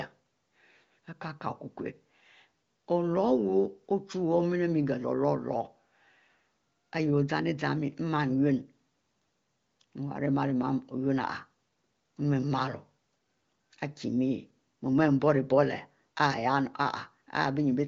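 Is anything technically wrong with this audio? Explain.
No, nothing in this speech clip is technically wrong. It has the sound of AMR wideband (HD Voice) coding at 23.05 kbit/s, with no content above about 7.5 kHz and at most faint coding damage.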